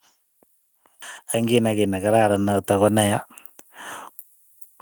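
A speech recording in which automatic gain rising lifts the level by about 10 dB between 1.31 s and 3.29 s. The gain control judged the input too quiet and turned itself up over roughly two seconds. Voice and background noise swell together, which separates it from a talker moving closer, where only the voice grows and its tone warms. The steady, slow climb also rules out compressor pumping, which reacts quickly to loud peaks.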